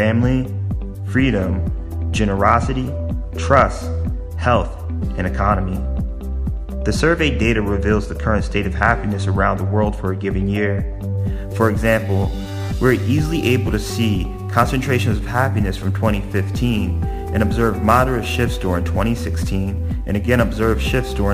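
From about 11.18 s to the end, sample clock jitter creeps in. The converter's clock is wobbling, on the order of ten microseconds, so each sample lands a touch early or late. That timing slop hurts most where the waveform moves fastest, so you get a grainy hiss riding on loud, bright passages, sitting maybe 25 dB under the signal, and it drops away whenever the sound goes quiet.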